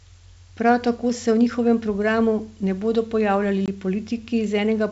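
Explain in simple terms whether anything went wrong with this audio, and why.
Something did go wrong: a short stretch of packet loss on an ADPCM call. Just after "programu ne bodo pojavljali", from about 3.66 to 3.69 s, a couple of packets never arrived and the gap was filled with silence, so the sound drops out with a hard edge. This wideband G.722 coding predicts each sample from the previous ones, so the missing data throws the receiver out of step with the sender. The sound that follows comes back slightly distorted before it recovers.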